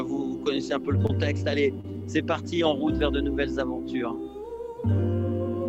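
A brief smear near 1.06 to 1.15 s and another near 1.81 to 1.85 s are short concealed packet loss. About 20 ms of audio failed to arrive in time at the first point and 30 ms at the second. The decoder bridged each gap by extending the preceding sound for 24 ms and then 30 ms before blending back, with the first repair adding roughly 10 ms to the timeline.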